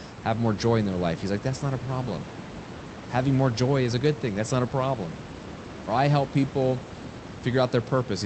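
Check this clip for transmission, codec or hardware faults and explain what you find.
No transmission, codec or hardware fault is audible: the speech sits about 12 dB above the room noise, and its high end stops near 8 kHz, which fits an Opus call path running at around 32 kbps with that bandwidth limit.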